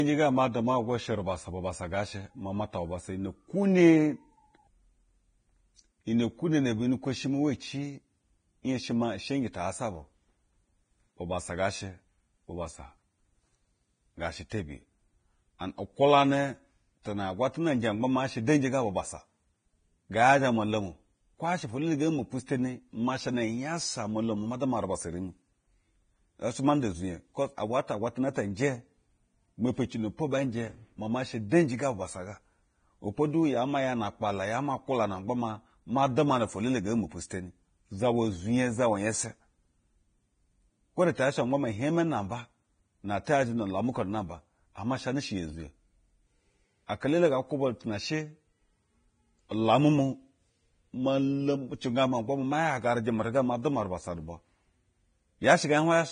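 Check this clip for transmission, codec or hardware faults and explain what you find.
The speech shows heavy codec damage throughout, plus four brief pre-echo events.

Vorbis compression: Across the whole clip there is nothing above 9.7 kHz, and the remaining treble is hissy and grainy, with sibilants turned to coarse noise and attacks blurred. The cause is likely low-quality Vorbis coding, consistent with a bitrate around 22 kbps. At that rate the encoder lowers its cut-off and quantises the residue above the spectral floor so coarsely that fine detail is replaced by noise of similar energy.

Pre-echo: Hiss runs ahead of sharp onsets at 14.50 s (19 ms), 15.59–15.61 s (24 ms), 20.12 s (18 ms) and 22.46–22.48 s (20 ms). Each attack falls late in a transform block, so quantisation noise sized for the loud onset is spread evenly across the block, including the quiet stretch before it. The onset sounds softened and smeared, with a short hiss leading in.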